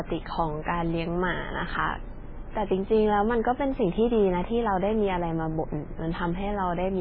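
Speech, with heavy damage throughout. Nothing survives above 5.2 kHz. The s sounds turn metallic and chirpy, and the tone swirls as weak detail flickers in and out. The likely cause is MP3 compression at a very low bitrate, around 16 kbps.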